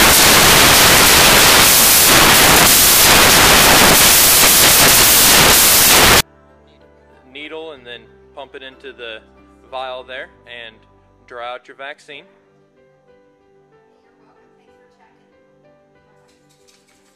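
From the start to 6.2 s, samples built from the wrong bytes turn the audio into loud, harsh broadband noise: the reader assembles each sample's bytes misaligned or swapped, so the rapidly changing low bits dominate. Unlike added background hiss, the noise replaces the signal outright.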